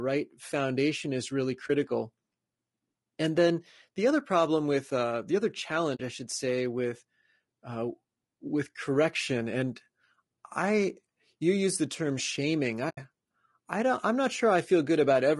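Throughout the speech, voices sound rough and grainy with plainly audible damage, likely low-delay AAC compression (AAC-ELD) starved at around 32 kbps, with noise between the harmonics. At 1.67–1.70 s, 5.95–6.00 s and 12.89–12.98 s the sound fades into a brief dip and soft-edged holes of 20, 40 and 80 ms: AAC frame loss with muting, where zeroed frames leave gaps consistent with one, two and four missing frames.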